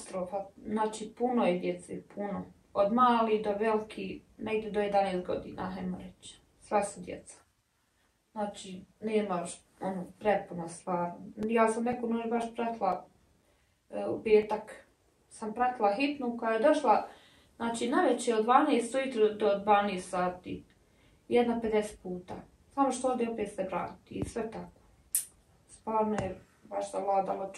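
Between 11.43 and 14.43 s the audio shows periodic USB or driver dropouts. Something is stalling the USB bus or the audio driver every 0.5 s, and each stall cuts out a few milliseconds of sound and leaves a short gap of silence in its place. Because the gaps fall evenly, about seven times across those three seconds, they come through as a regular run of ticks riding on the signal, stopping once the interruptions end.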